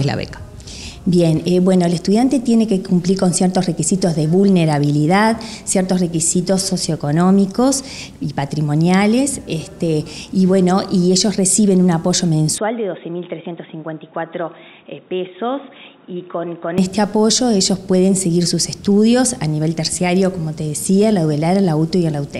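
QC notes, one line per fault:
12.58–16.78 s, input switched to a poorer device: the sound abruptly turns dull and boxy, with nothing above 3.8 kHz, drops by roughly 10 dB, and carries a different background noise sitting around 45 dB under the signal. There is no gap at either transition. The band limit, level drop and changed noise floor likely come from capture moving to a narrower-band microphone or headset call profile, then returning to the original input at 16.78 s.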